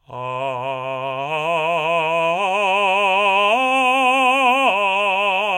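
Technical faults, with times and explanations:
No technical faults can be heard in this music. There is nothing here to time or explain.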